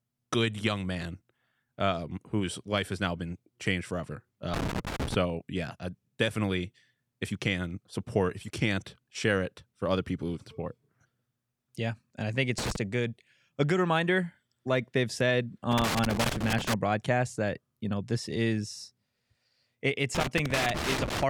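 A worn or dirty contact in the signal path is making and breaking as it shifts, so the speech is repeatedly chopped and any DC on the line turns each break into a pop. This loose connector crackle comes as irregular scratchy bursts from 4.54 to 5.14 s after "now been changed forever", from 12.58 to 12.76 s after "yeah and i think", from 15.71 to 16.74 s before "broadcasts that you know", and from 20.15 to 21.23 s.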